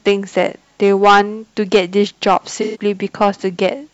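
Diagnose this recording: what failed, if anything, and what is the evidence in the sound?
Hard clipping at 0.08–0.47 s, 0.83–1.21 s, 1.75–1.79 s, 2.27–2.37 s and 3.21–3.69 s, in the converter or sample-format stage. The speech exceeds full scale by about 4 to 9 dB, worst at 0.83 s. The flattened peaks add high harmonics, heard as a harsh fuzz on loud syllables.

AAC frame loss with concealment at 2.61–2.81 s, in the codec or network path. About 128 ms of data is missing, which fits roughly three lost frames. The decoder patches the gap from the last good spectrum, leaving a brief smeared, phasey stretch in the speech.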